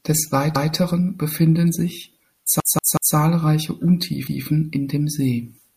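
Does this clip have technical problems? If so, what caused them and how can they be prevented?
Yes. A repeated buffer occurs at 0.56–0.74 s, just before "befinden sich", where a 0.19 s piece of speech plays one extra time, and again at 2.60–3.16 s, after "befinden sich", where the same-length piece sounds three extra times as a stutter with a hard join at each repeat. Fresh audio arrived late, so the device replayed its last block, which fits an 8192-sample buffer. Little or no speech is lost. Giving the audio thread higher priority and a larger safety margin between capture and playback would prevent this.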